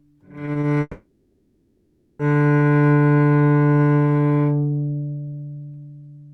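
At 0.45, 0.53 and 0.61 s, three short concealed packet losses, each about 20 ms of missing audio, were patched by the receiver extending the preceding sound and crossfading back. Each shows up as a small smear or wobble in the everyday sounds.

From 0.81 to 2.21 s a long network dropout is the likely cause of a 1.4 s gap: a synthesized continuation of the last sound stretches across nearly all of it, decaying, with a brief silence before the real audio resumes.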